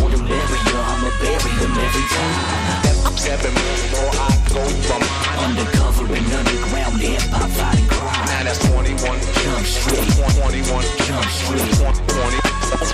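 Repeated frames at 10.29 to 10.47 s: a 185.8 ms stretch, likely two compressed frames, plays again, causing a stutter and lengthening the audio by 185.8 ms.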